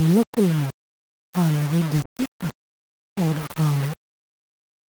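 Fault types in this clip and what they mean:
Low bit depth without dither: Grainy distortion that tracks the speech runs through the whole clip, with quiet passages turning gritty and the softest moments sputtering. The likely cause is rounding to about 4 bits with no dither, leaving error roughly 20 dB below the signal.
Call bitrate drop: From 2.05 s, right after "la kulmo xaalado", the encoder rate falls from 40 to 17 kbps and stays at its lowest for about 1.04 s. Speech turns rough and watery, and the audio bandwidth narrows from 20 kHz to 12 kHz, dulling the top end.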